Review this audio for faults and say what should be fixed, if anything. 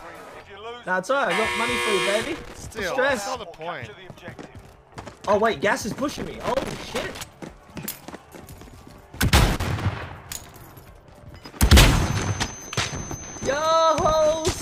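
A worn or dirty contact in the signal path is making and breaking as it shifts, which produces loose connector crackle. Each interruption chops the signal, and any DC on the line adds pops at the breaks, so the audio breaks into irregular bursts of scratching crackle from 2.23 to 2.64 s, 6.09 to 7.20 s, and 9.37 to 9.80 s, the middle burst running over a second. To prevent it, clean or replace the connector and strain-relieve the cable so it cannot move at the contact.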